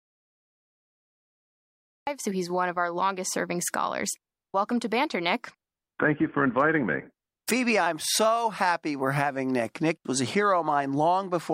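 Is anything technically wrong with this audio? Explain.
Yes. The clip opens in an audio dropout to silence that lasts until 2.07 s. The gap is silent, with no room tone. Speech then cuts in mid-flow at "so he's one of". The input was likely lost while the recorder kept writing silence.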